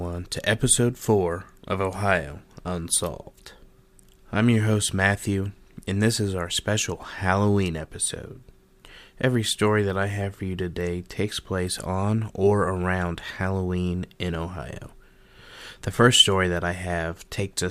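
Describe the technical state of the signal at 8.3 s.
No fault can be heard at 8.3 s; the speech signal is intact at that point.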